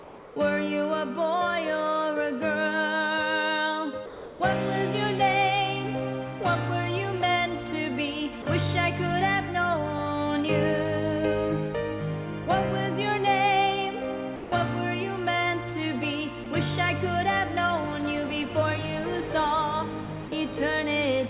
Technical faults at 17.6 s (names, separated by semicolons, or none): none